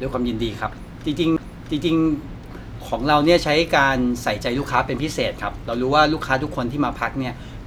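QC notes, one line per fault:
1.37 s, CD skip: a tick and a very short mute of around 10 ms, after which the speech resumes from a different point rather than where it left off. The laser has jumped to another turn of the disc's spiral, so a slice of audio is skipped or repeated. That discontinuity in content sets it apart from a plain dropout or a digital click, where the gap is filled or followed by continuous material.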